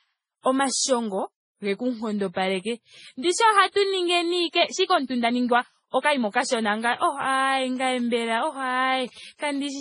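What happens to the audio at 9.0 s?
At 9.0 s the sound falls inside a stretch of GSM signalling bursts running from 7.76 to 9.66 s. A nearby 2G phone is sending short groups of radio bursts, and the audio circuitry rectifies them into the signal path. The result is a galloping dit-dit-dit of short 217 Hz buzzes, sitting roughly 25 dB below the programme level.

Underneath, the whole clip has a dull quality with nothing above 10.4 kHz. This is likely transcoding between lossy codecs. The audio appears to have passed through a low-rate MP3 stage and then a low-rate Vorbis stage. The second encoder spends its bits re-coding the first one's artefacts, and the two sets of coding artefacts are heard layered together.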